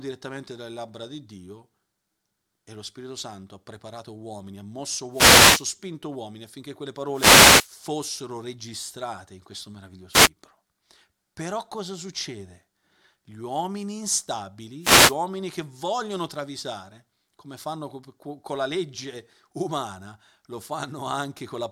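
Four wireless microphone noise hits land in this speech, each a quick swish of static as the FM radio link dips. At 5.11 to 5.65 s, right after "preparato uomini ha mosso", then 7.12 to 7.70 s after "uomini affinché quelle", briefly at 10.12 to 10.29 s, and at 14.81 to 15.16 s just before "che vogliono travisare come". Reflections cancel the carrier, so receiver noise rises for the length of each hit.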